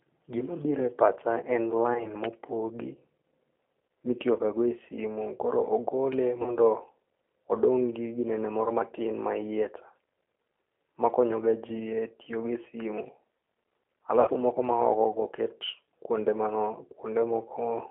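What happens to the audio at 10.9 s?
At 10.9 s the speech carries G.729 codec damage, which spans the whole clip. The codec rebuilds each 10 ms frame from a vocal-tract filter, a pitch predictor and a few pulses, which fits an 8 kbit/s G.729A stream. The speech sounds plainly rough and synthetic, with a boxed-in, telephone-like tone. On a spectrogram, energy stops sharply near 3.4 kHz and below 300 Hz, and the harmonics look smeared and grainy rather than cleanly striped.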